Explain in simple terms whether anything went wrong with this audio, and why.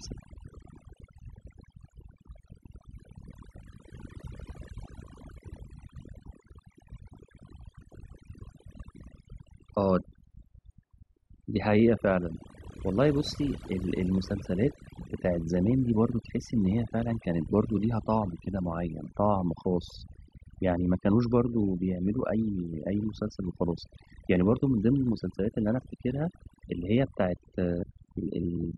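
Something did go wrong here: overdone noise removal, and it runs through the whole recording. A cleanup tool was pushed too hard, so it kept shutting off slices of the sound it mistook for background noise, and the softer parts of the voice got cut along with them. That's why the gaps between phrases drop down and break up into little sparkly bits.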